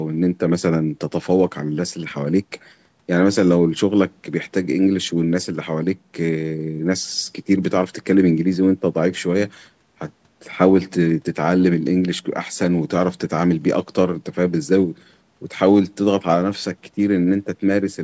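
A speech recording passed through a call's microphone processing, with nothing technically wrong with it.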